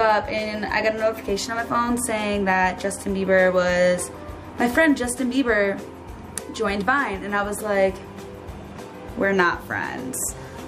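No technical faults can be heard in this audio.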